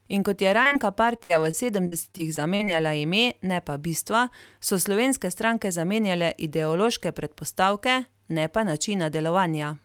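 Short concealed packet loss hits this speech recording three times in a row just after "kot je", at 0.63–0.67, 0.67–0.73 and 0.73–0.77 s, with about 20, 40 and 20 ms of audio missing. The receiver bridged each hole by extending the preceding sound, leaving a brief smeared wobble. Repeated packet loss (robotic sound) follows from 1.17 to 2.69 s: ten gaps, the longest 63 ms, together 280 ms or 18% of that stretch, each patched by continuing the last sound, so the speech turns choppy with pieces missing.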